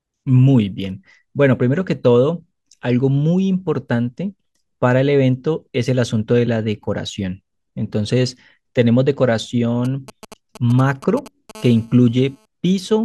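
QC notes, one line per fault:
9.85–11.51 s, GSM signalling bursts: a galloping dit-dit-dit of short buzzes at 217 Hz, around 20 dB below the speech. A nearby 2G phone is sending brief groups of radio bursts to the network, and the audio circuit rectifies each group into sound.
11.55–12.46 s, GSM phone buzz: a hard, raspy buzz at 217 Hz, rich in harmonics, steady and unrelated to the speech, about 27 dB below it. The phone is now in a call and transmitting 217 bursts per second, and the circuit rectifies every one of them into the audio.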